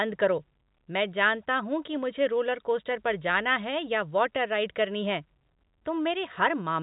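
No technical faults are audible in this speech recording.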